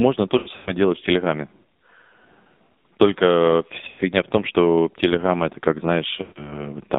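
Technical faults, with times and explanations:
Throughout: AMR narrowband mobile codec. The speech sounds buzzy and synthetic, boxed into roughly 200 Hz to 3.7 kHz, with heavy codec damage. At 5.9 kbps the AMR-NB vocal tract model gets very few pulses per subframe, so detail is rebuilt crudely.
0.38 to 0.71 s: lost AMR speech frames. Scattered dips and warbles, with one drawn-out stretch fading away before "делать в". About 160 ms of frames went missing over 280 ms, the longest run 100 ms, so the decoder repeated old pitch and vocal tract settings with falling gain.
3.88 to 4.00 s: lost AMR speech frames. The sound smears, stretches and fades out just before "в том что", returning weak. A 100 ms run of frames failed, and the decoder held the last good settings while turning the level down.
6.22 to 6.65 s: lost AMR speech frames. Just after "это как", the sound wobbles, stretches and sinks toward silence in places. 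About 140 ms of frames were lost, each concealed by reusing prior settings at decreasing gain.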